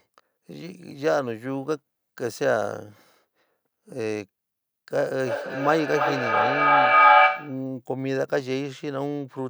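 From 5.19 to 7.73 s, feedback echo between two devices: speech returns roughly every 0.3 s, thinner and ringing, building to about 9 dB above the original.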